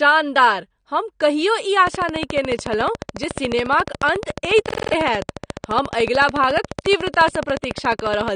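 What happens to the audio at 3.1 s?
At 3.1 s a train of clicks is running, spanning 1.87 to 8.29 s. Sharp, same-shaped pulses arrive regularly at 14 per second, around a hundred in all, likely from electrical interference or a faulty connection. They tick over the sound and pauses alike. On the waveform they show as evenly spaced spikes reaching well above the signal, roughly 15 dB. On a spectrogram they appear as thin vertical broadband lines.

Underneath, AAC compression damage is plainly audible, as it is throughout. The dull, smeared tone with a warbling, fizzy edge on sibilants is likely the result of coarse spectral quantisation at a low bitrate, which fits 32 kbps AAC-LC. A spectrogram shows a hard ceiling with nothing above 9.7 kHz.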